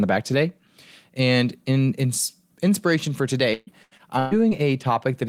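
From 3.53 to 4.53 s the speech breaks up with repeated packet loss, giving that robotic sound. Audio kept going missing across that second, around five gaps, the longest about 135 ms, and each hole got patched by stretching the last bit of sound forward. Roughly 38% of the stretch is that patched-over fill, so the speech comes out choppy, with pieces missing before it settles again.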